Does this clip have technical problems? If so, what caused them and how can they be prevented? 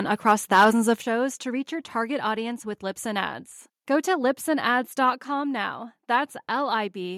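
Yes. From 0.28 to 0.92 s the loudest syllables turn harsh and crackly, their peaks flattened. This is likely microphone overload: the input runs about 5 dB past the converter's limit, so a small share of samples gets clipped. Lowering the microphone input level beforehand prevents it.

At 1.02 s, just before "to reach your target", speech and background both drop abruptly by about 6 dB. This is likely the microphone volume stepped down by the call software reacting to the preceding overload. Disabling automatic input-level adjustment and setting a safe gain in advance avoids it.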